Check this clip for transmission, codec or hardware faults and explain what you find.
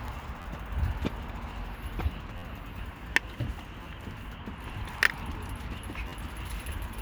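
There are four repeated buffer faults, at 0.42–0.45 s, 2.38–2.43 s, 3.83–3.85 s and 6.08–6.12 s. New audio arrived late, so the device replayed its last block. Each block lasts about 11.6 ms, which fits a 512-sample buffer. The same sliver sounds four, five, three and four times in turn, with a hard join at each repeat. It comes through as a brief buzzy stutter. Nothing is skipped afterwards.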